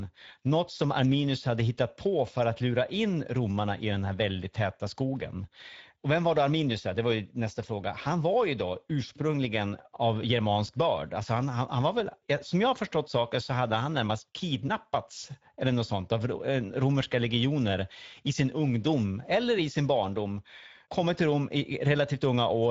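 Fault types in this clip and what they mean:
Speex codec: The speech passes through Speex, an older CELP voice codec from VoIP and game chat. CELP rebuilds speech from a filter driven by a coded excitation signal. With few bits for that excitation, the detail is lost. Here the damage is plainly audible as a grainy, coarse texture on the speech throughout. Nothing is present above 7.7 kHz. The amount of damage fits a mid-range setting near 16.8 kbps.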